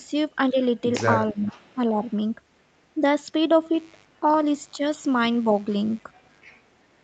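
Echo leak, 1.27 to 1.75 s: a faint delayed copy of the speech trails the talker by about 0.42 s, roughly 20 dB down. It is likely a far-end loudspeaker whose echo canceller let part of its microphone pickup pass back into the call.

Speech suppressed in double talk, 1.33 to 1.49 s and 1.75 to 1.97 s: while both sides overlap, the talker's level dips by around 10 dB in the first stretch and a milder 5 dB in the second. This is likely the canceller failing to tell local speech from loudspeaker echo and ducking both.

A second, much weaker echo scrap at about 2.1 s sits roughly 40 dB below the speech at the same 0.42 s delay.

Mains buzz, 3.73 to 6.58 s: a steady, raspy buzz built on 50 Hz and its harmonics runs about 30 dB under the signal. Sharp switching spikes from a dimmer, rectifier or unshielded lead, arriving twice per mains cycle, spread energy into the upper harmonics.

Further brief double-talk dips of around 5 dB occur at 4.21 to 4.27 s and 4.72 to 4.79 s, each lasting roughly 70 ms. 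A last faint echo scrap follows at 6.73 to 6.84 s, again about 40 dB down.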